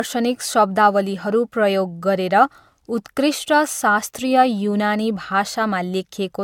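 Repeated lossy re-encoding, likely about three AAC passes near 96 kbit/s, causes generation loss throughout: the speech sounds swirly and hollow, attacks smear, and nothing remains above 17 kHz.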